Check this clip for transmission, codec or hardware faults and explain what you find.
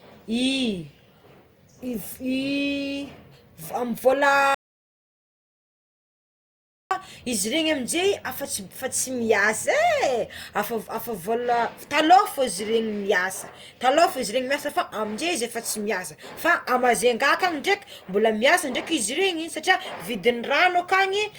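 There's one fault here, an audio dropout to silence. From 4.55 to 6.91 s the speech cuts to silence for about 2.4 s, no room tone at all, most likely because the input was lost while the recorder kept writing silence.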